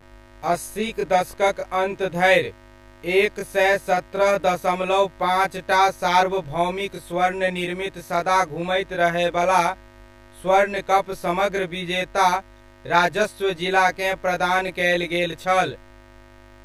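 From start to finish, a mains buzz sits under the speech: sharp switching spikes at twice the 50 Hz mains rate feed a raspy tone roughly 25 dB below the speech. On a spectrogram it appears as unbroken horizontal lines at 50 Hz multiples reaching into the kilohertz range.

Throughout the clip there is also channel delay with comb filtering. One channel arrives around 20 ms late, and summing to mono cancels shared content at evenly spaced frequencies, starting near 20 Hz. The speech sounds rough or slightly doubled, and a spectrogram shows fixed, regularly spaced dark notch bands.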